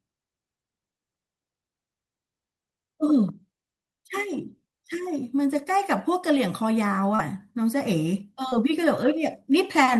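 It's a speech clip with two bits of short concealed packet loss, at 7.15 to 7.2 s and 8.49 to 8.54 s. Each time about 40 ms arrived too late, and the receiver papered over roughly 30 ms by stretching the preceding sound before easing back in, so you get a brief smeary blip.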